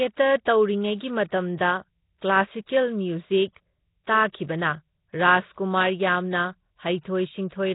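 Throughout the clip the speech has a rough, hissy halo and a smeared, underwater quality, with nothing above 3.8 kHz. The damage is heavy and most likely comes from Nellymoser compression. A codec of that kind spends a fixed, small number of bits on each short block. Weak bands get no bits at all and are filled with noise, and the result fits a rate around 16 kbps. That band-filling noise is what separates it from plain low-pass filtering, which would only sound muffled and not grainy.

At 0.45 s, and again from 1.58 to 1.60 s, a short hiss arrives just ahead of a sharp attack, spreading 16 ms and then 24 ms earlier. This is pre-echo. The codec spreads the quantisation noise meant for the loud onset across its whole block, including the quiet moment before it, so the attack sounds softened. Unlike a click or dropout, the noise comes before the transient and is tied to it.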